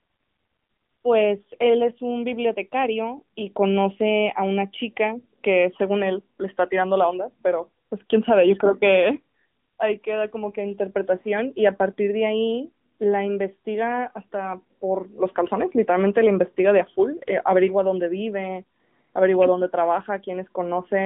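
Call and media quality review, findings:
AMR narrowband mobile codec, whole clip. Speech band-limited to roughly 150 Hz–3.5 kHz, nothing above 3.6 kHz; muffled, telephone-like, plainly audible buzzy, synthetic edge on voiced sounds. Probable component: AMR-NB encoder in the mobile leg, which points to 8 kHz sampling and a mid-rate mode near 10 kbps. Mechanism: vocal-tract model plus sparse excitation pulses per 5 ms; fine detail discarded, high band removed entirely.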